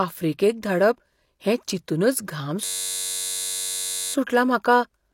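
From 2.65 to 4.14 s a system hang loop occurs: the computer froze while the sound hardware kept replaying one 10.67 ms stretch of its ring buffer, which fits a 512-sample buffer. It sounds like a steady buzz at 93.8 Hz until the speech resumes with "सुटला म्हाका".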